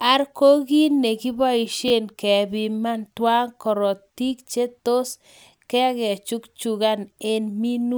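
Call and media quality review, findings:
Chunks out of order at 1.88–1.90 s, just before "kepiman tyaa korotik che". A 10 ms block of speech played one chunk late, after its successor. The swap creates a brief jumbled blip with three hard joins. Probable component: jitter buffer or playout queue reordering.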